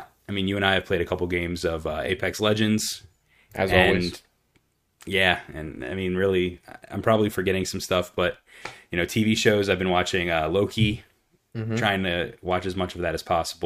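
A speech recording with no technical faults to report.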